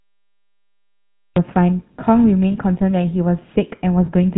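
Throughout the clip the speech carries the GSM full-rate codec, and the damage is plainly audible. The codec models the vocal tract as a filter and feeds it a coarse pulse-train excitation, keeping only a fraction of the excitation samples, and nothing above 4 kHz gets through. The result is a narrowband, buzzy, gravelly texture laid over the whole recording, consistent with the 13 kbps full-rate GSM scheme.

The clip opens with a cut-off start. From 0.0 to 1.36 s there is only digital silence, and at 1.36 s the speech appears abruptly in the middle of a sound, with no natural attack or fade-in. This is the signature of a recording or stream that began late and caught the talker mid-utterance. The hard edge at 1.36 s is the audible marker.

From 2.52 to 2.54 s there are lost GSM frames. The decoder fills the gap by repeating the parameters of the last good frame, so for roughly one 20 ms frame the sound freezes into a short, rough, metallic ring rather than continuing naturally. 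A second instance of the same fault occurs from 4.06 to 4.09 s, again pointing to a single dropped 20 ms frame. Both gaps are brief, so each is heard as a momentary tinny smear with no fade to silence.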